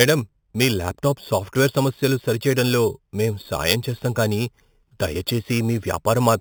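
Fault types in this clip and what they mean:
Imaging from sample-and-hold upsampling: The speech was raised to a higher rate by repeating each sample, with no smoothing filter afterwards. Mirror copies of the spectrum appear above the original band. The first copy spans 4 to 8 kHz. This points to audio at 8 kHz brought up to 48 kHz. The copies sit about 14 dB below the speech. They add a bright metallic fizz that rises and falls with it throughout.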